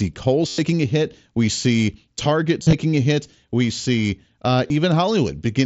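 Voice packets between the headset and phone were dropped, and the receiver filled each gap by repeating the best-matching stretch of recent waveform: concealed Bluetooth headset packet loss. From 0.48 to 0.58 s about 105 ms is replaced, heard as a buzzy held tone at full level. Around 2.62 to 2.73 s the losses scatter, the longest run 45 ms, giving broken buzzing. At 4.68 s a brief 22 ms gap is filled in, all through the mSBC wideband link.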